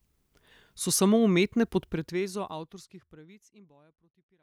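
Nothing stood out on listening to this speech, and the gentle fade-out over roughly the last couple of seconds, ending at 4.43 s, is a smooth, deliberate edit with no hard edge.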